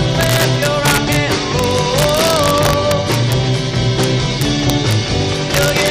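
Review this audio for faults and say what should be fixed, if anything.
Integer overflow runs through the whole clip: the loudest peaks are pushed about 4 dB past full scale, and instead of limiting, those samples wrap to the opposite extreme. The few affected samples produce sharp, violent cracks on loud moments. Fix by using saturating arithmetic or a limiter before integer conversion.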